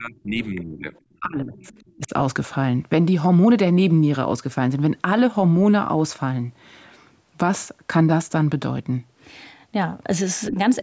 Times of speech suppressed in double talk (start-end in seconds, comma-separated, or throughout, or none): 0.00-0.94, 1.20-1.70, 1.96-2.12, 10.50-10.57